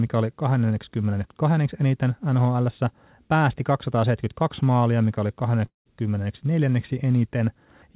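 A long network dropout runs from 5.66 to 5.87 s, just after "maalia mikä oli". The stream likely stopped arriving, so the receiver stretched the last sound into a fading buzz, filling about 190 ms, which includes 140 ms of near-silence. About 200 ms of the clip never returns. Through the G.711 mu-law path, nothing sounds above 4 kHz.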